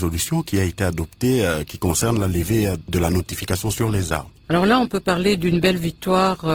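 At 1.85 s the audio switches abruptly to a lower-bitrate version of an adaptive stream and stays there to the end. Smeared codec artefacts rise, which fits a fall from about 64 kbit/s Opus to about 16 kbit/s as the connection slowed. Unlike a dropout or a buffer stall, there is no gap or repeat at the switch. Quality simply steps down in a single instant.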